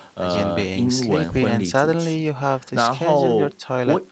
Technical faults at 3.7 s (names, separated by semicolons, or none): none